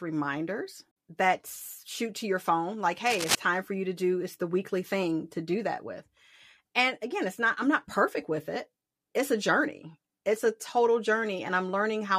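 From 3.06 to 3.35 s, a dense, uneven scratching rustle sits over the speech at about its loudness: cable scratch noise, likely a worn connector shifting contact.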